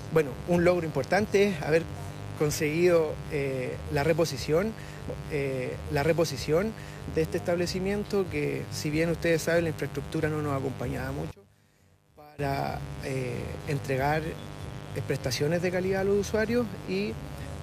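A mains buzz runs throughout, from spiky 50 Hz interference with harmonics stacked into the kilohertz range. It sounds raspy, about 15 dB under the signal, and shows as evenly spaced horizontal spectrogram lines. From 11.31 to 12.39 s the sound collapses by about 24 dB to a faint residue, likely one channel inverted cancelling on mono summing. The waveform visibly shrinks there.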